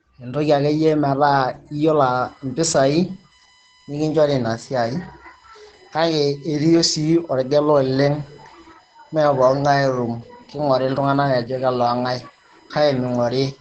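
From the start, the speech carries Opus voice compression that is plainly audible. It sounds muffled, slightly hoarse and faintly robotic, which fits the SILK linear-prediction coder working at around 12 kbps in wideband mode with 20 ms frames. The excitation is coded coarsely, giving a buzzy, synthetic grain. This differs from transform codecs like MP3, which smear into swirly, watery artefacts. The top of the band is gone too, with nothing above 15.4 kHz.

From 2.02 s until the end, a USB whine sits under the speech. It is a steady, fixed-pitch tone built on 1 kHz, with its strongest component at the 5 kHz harmonic, roughly 35 dB below the speech. This points to current drawn in the bus's 1 ms frames leaking through power or ground. Mains hum would instead sit low, at 50 or 60 Hz and its harmonics. The whine's thin, high pitch does not move with the talker, which sets it apart from codec artefacts.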